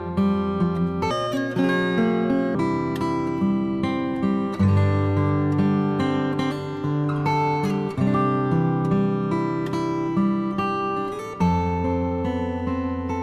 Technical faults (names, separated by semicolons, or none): wrong sample rate